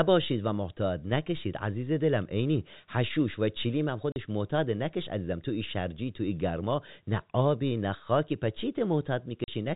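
A speech clip with packet loss filled with silence: at 4.12 s and again at 9.44 s the audio drops out for 40 ms, with hard-edged gaps consistent with two consecutive 20 ms packets lost each time and replaced by silence, over band-limited telephone-style G.711 coding.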